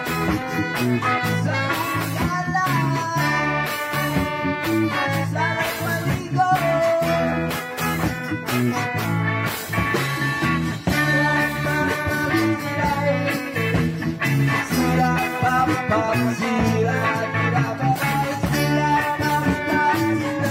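No faults turn up anywhere in the recording; nothing in it calls for attention.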